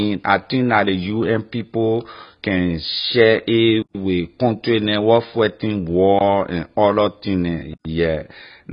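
The whole speech clip sounds dull, smeared and warbly with nothing above 5 kHz, likely heavy AAC compression, consistent with AAC-LC at a very low bitrate around 16 kbps. A block of digital silence cuts in abruptly from 3.82 to 3.95 s after "people can share a", as a brief 18 ms gap at 6.19 s between "country neh where fighting" and "and other thing neh", and from 7.73 to 7.85 s after "and other thing neh", where silence replaced the signal.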